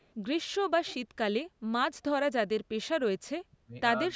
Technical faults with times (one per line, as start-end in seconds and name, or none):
0.00-0.13 echo leak
3.57-3.75 speech suppressed in double talk
4.09-4.15 speech suppressed in double talk